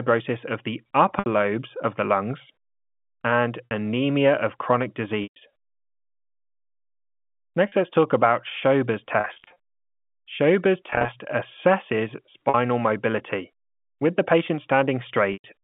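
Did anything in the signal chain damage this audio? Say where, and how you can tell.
Yes, at the network stage: packet loss with pitch repetition, concealed at the receiver over the G.711 telephone line. Gaps fall at 1.19, 3.65, 5.23, 7.68, 9.20–9.56, 10.90–11.08, 12.49 and 15.33 s. Most gaps last 40–130 ms, and the lengths fit 10 ms packets. The two longer spans are scattered losses in short runs. Each gap begins with a buzzy, repeated pitch period rather than the hard silence or click of a buffer dropout.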